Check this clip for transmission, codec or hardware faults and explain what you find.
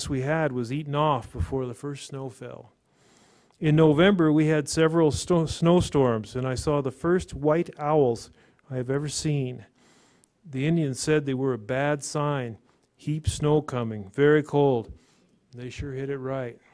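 I found no faults to report in this clip.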